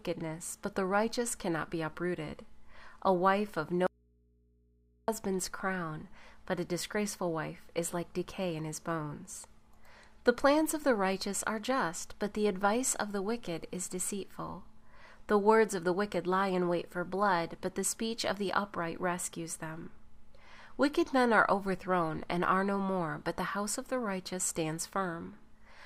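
A brief audio dropout to a faint residue occurs between 3.87 and 5.08 s, most likely because the signal feeding the chain was lost while the path downstream stayed live and open. For about 1.2 s the wanted sound cuts out abruptly, mid-flow, and the gap holds only low mains hum from the unterminated input, sitting roughly 35 dB below the normal level. The sound then snaps straight back rather than fading in.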